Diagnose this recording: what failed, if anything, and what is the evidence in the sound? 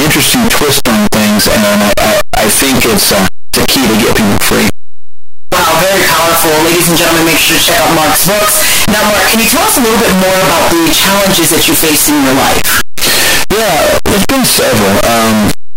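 Sample-format conversion, likely signed and unsigned mixed up in 8-bit samples: harsh, very loud distortion throughout, with soft sounds as loud as strong ones; the waveform leaps between extremes at each zero crossing, and the spectrogram is broadband.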